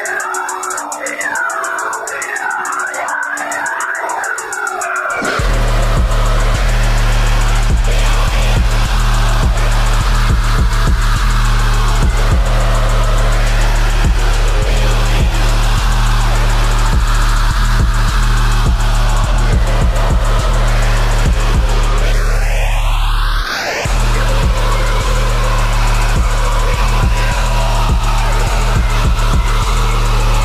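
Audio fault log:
No fault appears in this audio, so the log has nothing to record.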